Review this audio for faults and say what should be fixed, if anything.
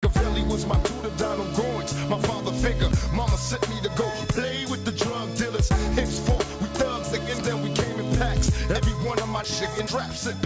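The resampler restarted on every 10 ms block from 2.62 s onward. Errors at each block edge form a 100 Hz buzz whenever signal is present. Carry the resampler's filter state across blocks so each edge sees its true neighbouring samples.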